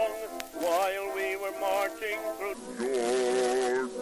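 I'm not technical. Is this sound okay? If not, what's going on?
No. From 2.54 s to the end, the sound drops lower and slows to about three quarters speed. This is a wrong sample rate fault.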